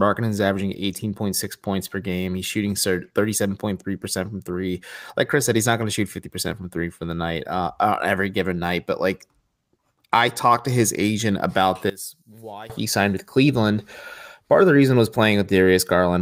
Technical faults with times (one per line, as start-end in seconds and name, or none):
11.90-12.70 one channel inverted